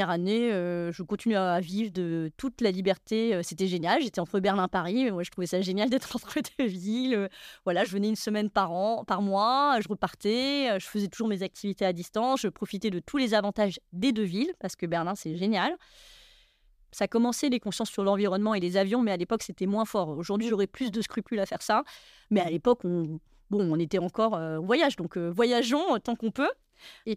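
Speech with no audible faults.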